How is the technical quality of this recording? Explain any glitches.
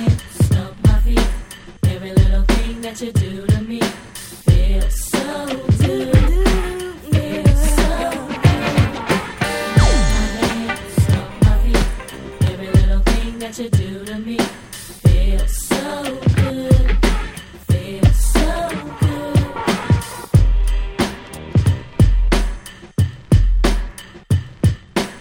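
The technical quality of this recording is sound, with no glitches to explain.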